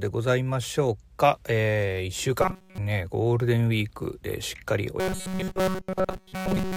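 From 2.42 to 2.78 s, the speech turns into robotic sound from repeated short buffers. It happens again from 5.0 s to the end of the clip. Both times a rigid, metallic buzz at 188 Hz replaces the natural voice, and almost nothing new gets through. The likely cause is audio arriving too seldom, so the software loops a fragment of about 5.3 ms. That loop length sets the fixed buzz pitch.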